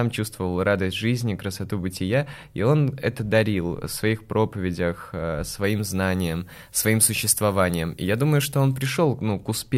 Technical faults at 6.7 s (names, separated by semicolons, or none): pre-emphasis left on